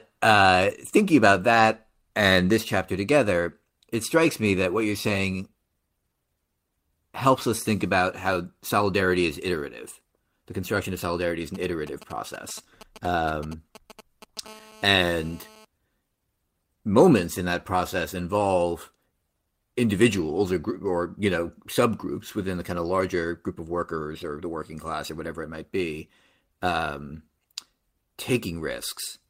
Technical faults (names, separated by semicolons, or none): lost packet rebuilt from error correction; GSM signalling bursts; GSM phone buzz